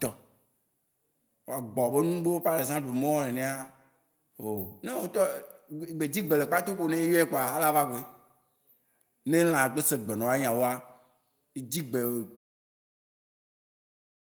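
There are no technical faults to describe; the speech simply fades out smoothly at the end, from about 12.4 s.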